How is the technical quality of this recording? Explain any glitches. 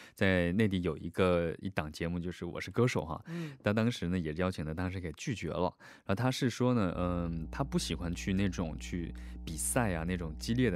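The recording's quality is compromised by mains hum in its final stretch. From 6.94 s to the end, a steady low 60 Hz drone rises up under the speech, sitting only roughly 10 dB below it, so it is clearly audible and muddies the low end. The cause is power-line interference: a ground loop or a nearby transformer couples the 60 Hz mains frequency into the signal path, adding a constant tone with some low harmonics.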